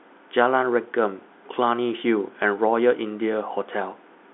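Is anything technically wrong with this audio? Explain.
No, nothing is technically wrong: this speech carries the ordinary signature of G.711 telephone coding, with the line band running from about 250 Hz to 3.6 kHz and nothing above 3.8 kHz, which is simply how a standard fixed-line call sounds.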